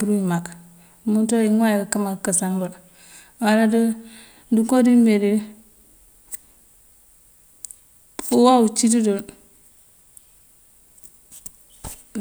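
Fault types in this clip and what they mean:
No faults can be heard.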